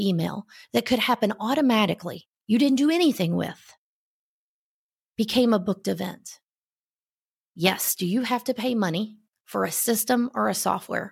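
A speech recording turns dull from 3.48 to 4.89 s, between "you didn't do anything" and "became a booked event", with the upper treble dimmed. This is channel delay (comb filtering): one channel arrives a tiny fraction of a millisecond late, and summing to mono cancels the shared signal at regularly spaced frequencies. A first notch around 10 kHz points to an offset of only a couple of samples.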